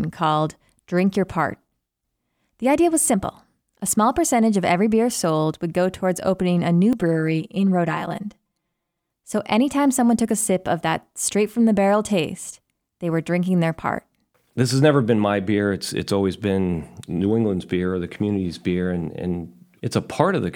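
Channel delay with comb filtering appears from 6.93 to 9.10 s. One channel runs late by roughly 5 ms, and when the two channels are summed to mono, the parts of the speech shared by both cancel at regularly spaced frequencies, with the first notch near 100 Hz and further ones about every 200 Hz above it. For those two seconds the speech sounds hollow and phasey, as if heard through a tube, then returns to full body.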